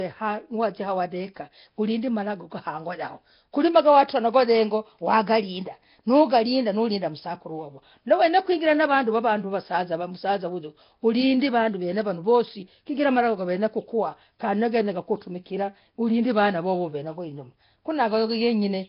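Speech runs throughout with a rough, hissy halo and a smeared, underwater quality, and nothing above 5.3 kHz. The heavy damage is likely Nellymoser compression, whose coarse fixed-rate coding drops weak bands and refills them with noise, fitting a stream around 22 kbps.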